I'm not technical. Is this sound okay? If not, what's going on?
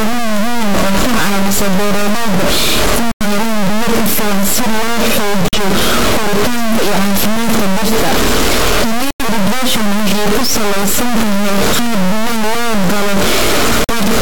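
No. Throughout, the speech is distorted, and even the pauses hiss; this is likely a stuck bit, since ordinary overload distortion would leave the pauses quiet.

Four short holes of sudden silence are corrupt frame muted: 3.12 to 3.26 s (before "helaan biyo ku filan"), 5.48 to 5.58 s (before "koritaanka iyo caafimaadka dhirta"), 9.11 to 9.24 s (before "irrigation waxay ku saleysan"), and 13.84 to 13.95 s. Unlike a dropout that stretches the timing, the speech resumes on schedule.

At 11.82 to 11.88 s there is a loud pop, two sharp clicks in quick succession, likely from a plug, switch or static. The speech carries on underneath rather than cutting out.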